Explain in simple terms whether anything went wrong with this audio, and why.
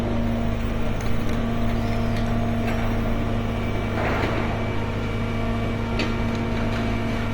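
Throughout the clip, the sounds come across noisy, rough and grainy rather than clean, which points to Opus compression, likely squeezed hard enough to blur fine tonal detail.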